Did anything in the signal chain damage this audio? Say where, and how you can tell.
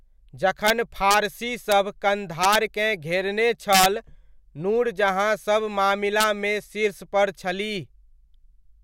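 Yes. There's integer overflow on speech peaks, most likely in a fixed-point gain or sample-format conversion stage. Harsh cracks hit at 0.67–0.70 s, 1.11–1.14 s, 1.72 s, 2.44–2.55 s, 3.73–3.86 s and 6.21–6.24 s. The signal only goes about 0 to 2 dB past full scale, but instead of clipping it wraps around to the opposite sign. That full-range jump is why these sound far sharper than ordinary clipping.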